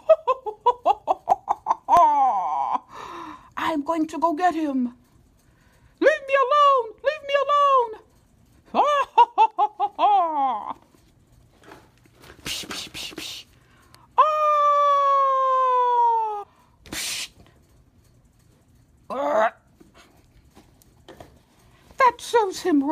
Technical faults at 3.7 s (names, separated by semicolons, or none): none